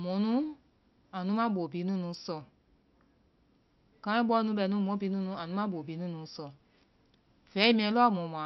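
Nothing in this recording stands out as a technical fault, so there's nothing to walk through here.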